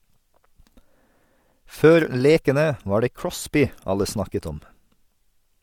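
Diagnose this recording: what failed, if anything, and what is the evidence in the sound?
Nothing in the recording points to a failure at any stage of the chain. No defect can be heard anywhere in the speech.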